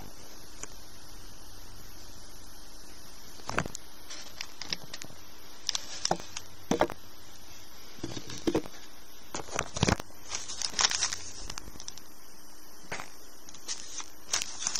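Buffer tearing runs throughout. The ring buffer's writer and the hardware reader have slipped, so a small slice of each period, around a twentieth, replays audio from about 70 ms earlier. Its hard joins give a steady 50 Hz rattle whenever sound is present.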